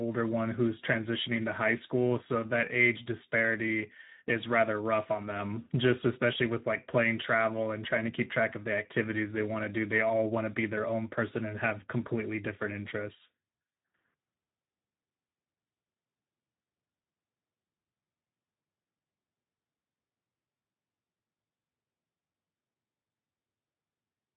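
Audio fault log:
throughout, Speex codec: narrowband CELP coding starves the excitation, leaving speech plainly coarse and hoarse with nothing above 3.8 kHz, which fits roughly 11 kbps.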